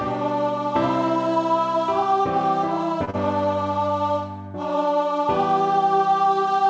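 At 3.05 s to 3.10 s there is a short stall from a late packet. The jitter buffer ran dry, so the receiver held the last sound for about 24 ms and then resumed where it left off. Nothing is lost, only delayed, so what you hear is a sustained sound with a faint buzz or dip rather than a gap.

Straight after, from 3.10 s to 3.16 s, comes a short concealed packet loss. Here about 30 ms of audio never arrived, and the receiver invented a continuation before blending back. Unlike the stall, real material is gone, heard as a brief smear or wobble, within a call-codec band that stops at 8 kHz.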